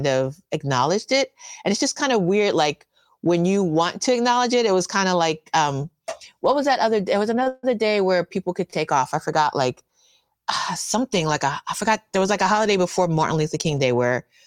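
At 7.43 to 7.48 s a packet of this speech arrived late and the jitter buffer ran dry, producing a short stall from a late packet: the receiver held the last sound for about 27 ms until the packet turned up, then resumed where it left off. Nothing is lost, but the sound drags briefly with a slight buzz or dip, and everything after it runs about 27 ms later.

From 7.48 to 7.65 s comes a call audio freeze, likely caused by packets being held up on the network long enough to empty the buffer again. The receiver stretches the last sound into a fading buzz or hiss over roughly 151 ms, ending in about 10 ms of silence, and then the audio continues from the same place. This inserts a gap rather than dropping any content, adding about 151 ms of delay.

At 8.70 to 8.74 s, between "where people could" and "off I forgot like", another late packet causes a second short stall. About 23 ms is filled by holding the preceding sound, which gives a slight buzz or dip and adds about 23 ms of delay.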